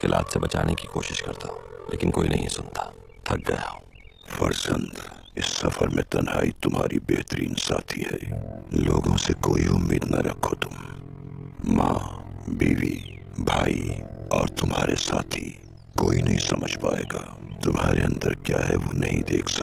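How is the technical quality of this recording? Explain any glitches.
Quality is poor: an overlap-add ripple runs through the whole recording. The frames were windowed and rejoined with an overlap that doesn't sum to constant gain, so the level swings by about 60 dB once per frame, around 40 times a second, producing a fast, rough flutter.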